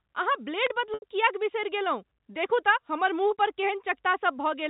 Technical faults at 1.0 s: packet loss with pitch repetition

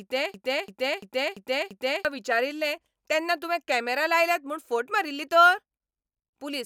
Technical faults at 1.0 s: system hang loop

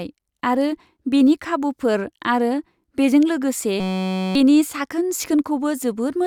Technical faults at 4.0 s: system hang loop

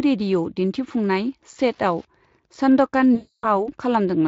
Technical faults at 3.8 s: Wi-Fi interference

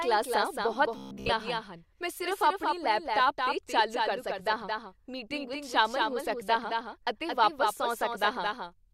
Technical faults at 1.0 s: doubled audio track; robotic sound from repeated short buffers

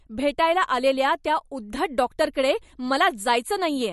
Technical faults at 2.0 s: MP3 compression

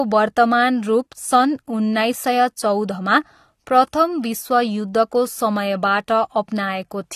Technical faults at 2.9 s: AAC compression

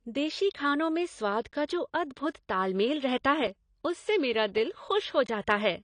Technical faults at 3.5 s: AAC compression; block of digital silence

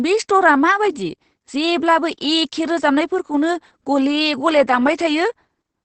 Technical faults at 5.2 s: Opus voice compression

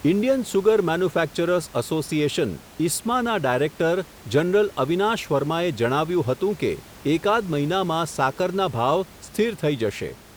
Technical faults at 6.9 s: none

